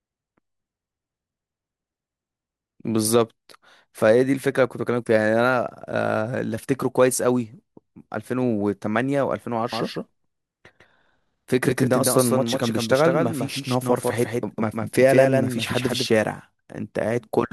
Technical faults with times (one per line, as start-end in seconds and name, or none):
9.72-16.06 doubled audio track